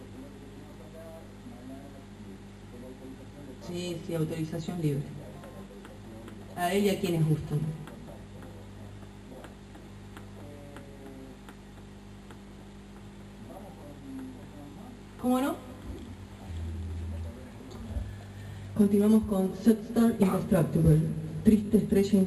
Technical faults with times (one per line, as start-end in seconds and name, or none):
14.71-14.75 repeated frames
21.65-21.70 repeated frames